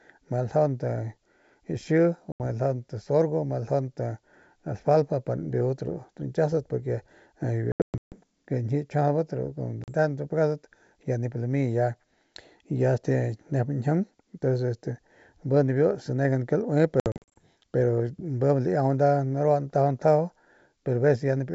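At 2.32 s about 80 ms of the call drops out as a hard-edged silence, then about 40 ms at 9.84 s; at 7.72 s and 17.00 s the losses come scattered, roughly fifteen and ten packets over 400 ms and 360 ms. This is packet loss on an ADPCM call: the G.722 decoder's predictor and step size lose track of the sender's, so speech resumes slightly distorted before settling.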